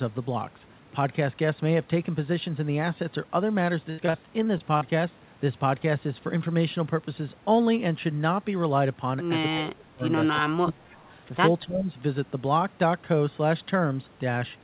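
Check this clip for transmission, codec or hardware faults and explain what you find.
Three kinds of fault are audible in this speech, all transmission-side, over a telephone-band path whose 4 kHz ceiling fits a G.711 narrowband codec.

Repeated packet loss (robotic sound), 3.9 to 4.83 s: six gaps, the longest 79 ms, are patched by extending prior audio. About a quarter of the span sounds choppy and robotic.

Speech suppressed in double talk, at 9.53 to 10.02 s, 10.34 to 11.0 s and 11.65 to 11.89 s: the voice dips by up to about 25 dB. The likely cause is an echo canceller ducking both talkers during overlap.

Echo leak, 10.90 to 10.96 s: a faint copy trails the voice by 262 ms, about 30 dB down. It is likely residual loudspeaker pickup that the canceller missed.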